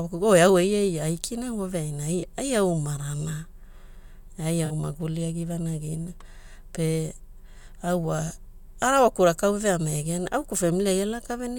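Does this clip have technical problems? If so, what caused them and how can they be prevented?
Yes. Short concealed spans occur in the speech at 2.20–2.24 s, 4.65–4.72 s and 8.28–8.31 s. This is corrupt frame concealed: the decoder caught damaged AAC frames and masked them, spans fitting two or three frames. Error-protected transport would prevent it.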